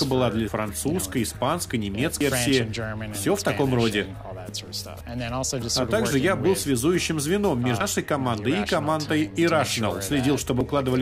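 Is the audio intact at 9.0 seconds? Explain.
Yes, the audio is intact at 9.0 seconds, with no dropout, click, distortion or other fault audible at that point.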